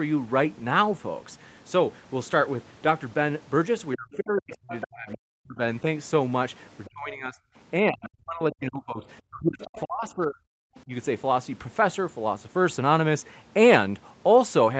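Speech suppressed in double talk, 3.95 to 5.59 s: the talker's speech dips by as much as about 40 dB for roughly a second and a half, likely because the echo canceller could not separate local speech from loudspeaker echo during overlap and turned everything down. Other side's voice leaking through, 4.12 to 5.18 s: a second voice sits about 20 dB below the speech, likely far-end audio the echo canceller left in the microphone signal. At 6.85 to 6.9 s a brief leaked scrap appears, about 30 dB down, and speech suppression follows from 6.89 to 7.37 s, dipping about 25 dB. Suppression returns from 7.85 to 10.38 s, with drops near 40 dB across about two seconds, while leaked audio surfaces from 9.62 to 9.81 s at about 20 dB below. A faint leak at 10.76 s, about 35 dB down, precedes a short, shallow dip of about 15 dB from 10.84 to 10.91 s.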